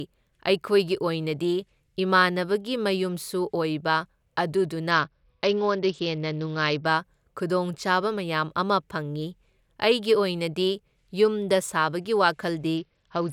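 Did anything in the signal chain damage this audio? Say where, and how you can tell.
Yes. The damage is a Bluetooth SBC bit pool drop at the codec stage over a congested wireless link. From 4.91 to 6.86 s, and again from 12.77 s to the end, the speech loses its treble and takes on a gritty, granular noise. Both stretches fit the encoder cutting its bit pool from 31 to about 8, roughly 66 kbps. The upper sub-bands then get almost no bits, and the remaining bands are coarsely quantised.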